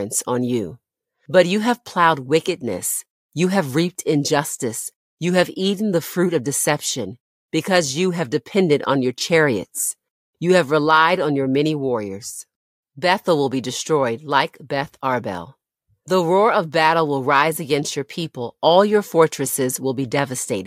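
Listening closely to the recording, nothing stood out as a technical problem at any point.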